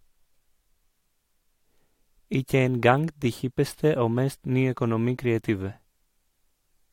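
Recorded speech, with no technical fault audible anywhere in the signal.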